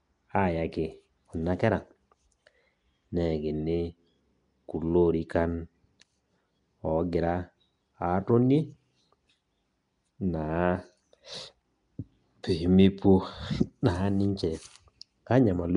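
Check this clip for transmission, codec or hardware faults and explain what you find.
One codec fault runs through the whole speech clip: Nellymoser compression, likely from the Nellymoser Asao codec that Flash used for microphones. Each short block gets a fixed, small bit budget. Weak bands are dropped and refilled with noise, which gives the speech a rough, hissy halo and a smeared, underwater quality. The damage is plainly audible and fits a rate near 44 kbps. A spectrogram shows blocky, noise-speckled patches and nothing above 10.6 kHz.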